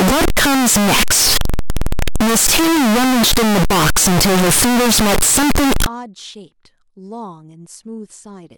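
The 16-bit samples were likely interpreted with the wrong signedness from the start to 5.86 s, signed values read as unsigned or the reverse, so the top bit of every sample is flipped. Each time the waveform crosses zero it jumps across the full range instead, and the speech turns into very loud, harsh distortion in which the quiet stretches come through as loud as everything else.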